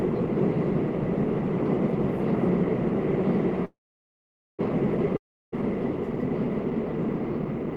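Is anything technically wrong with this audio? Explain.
Yes, there are two gaps in the audio.

From 3.65 to 4.61 s there's a call audio freeze. The sound stalls with a short fading tail, then goes quiet for about 0.83 s. Packets were likely held up until the jitter buffer ran dry. Nothing is skipped when it resumes; everything after just runs about 0.93 s late.

From 5.17 to 5.54 s there's a long network dropout. The last bit of sound fades briefly, then there's roughly 0.32 s of silence. The likely cause is packets lost outright, so when the audio returns about 0.36 s of it is simply gone.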